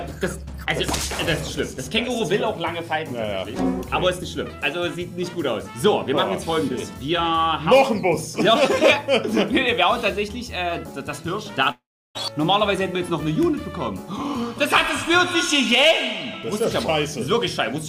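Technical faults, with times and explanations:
11.71–12.17 s, long network dropout: sound smears into a fading buzz, then 0.33 s of silence, likely from lost packets; the spectrogram shows blurred bands and a blank gap.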